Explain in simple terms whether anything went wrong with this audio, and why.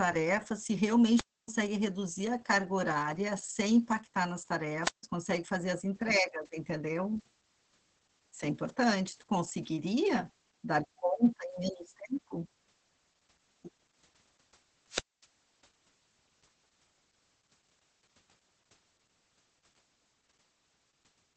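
The speech sounds muffled and slightly hoarse and robotic throughout, with nothing above about 8.4 kHz. That is heavy Opus voice compression: the audio was squeezed very hard, so the codec dropped the high frequencies and rebuilt the voice only roughly.

The sound also briefly fizzes and then drops into near silence three times: at 1.13 to 1.50 s, 4.82 to 5.04 s, and 14.89 to 15.26 s, with each gap lasting about a quarter of a second or less. These are wireless microphone squelch dropouts. The radio signal weakened, so the receiver muted its output until the signal recovered.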